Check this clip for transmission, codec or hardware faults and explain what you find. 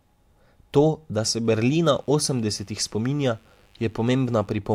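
One fault is present in the speech, a mains buzz. Mains buzz runs from 1.44 s to 4.49 s, beginning just after "da se". Sharp switching spikes, entering through a dimmer, rectifier or unshielded line, arrive twice per 50 Hz cycle and spread harmonics into the kilohertz range. The result is a steady, raspy buzz about 40 dB below the speech.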